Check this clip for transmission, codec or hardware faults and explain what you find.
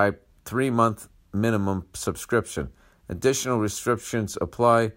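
No transmission, codec or hardware faults can be heard anywhere in the speech.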